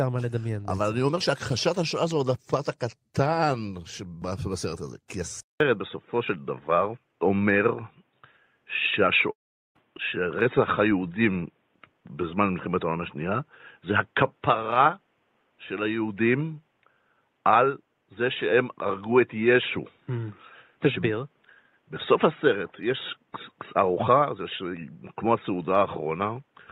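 At 5.40 s the input likely switched to a poorer device: after a 0.2 s gap, the speech turns dull and boxy for the rest of the clip, with nothing above 3.8 kHz, a level shift of roughly 5 dB, and a new background noise sitting well below the speech.

From 9.31 to 9.78 s comes a long network dropout, likely lost packets, in which about 0.44 s of speech never arrives. The receiver stretches the last sound into a fading buzz, then leaves silence until the speech resumes with that portion missing.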